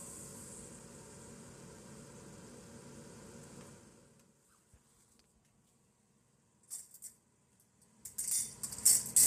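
Throughout this recording of sounds the texture is plainly rough and grainy, with a hazy noise filling the gaps between tonal parts and a dulled, synthetic top end. The likely cause is low-delay AAC compression (AAC-ELD), whose short frames resolve fine frequency detail poorly and spend bits inefficiently. The damage points to a low bitrate, around 32 kbps.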